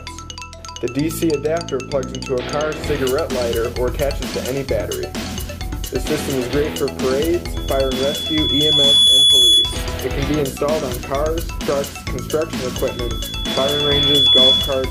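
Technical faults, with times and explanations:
7.53–9.84 s and 12.76–14.91 s: loudspeaker feedback squeal, a 3.4 kHz tone swelling over about a second and a half to roughly 10 dB above the sound as the mic-speaker loop runs away.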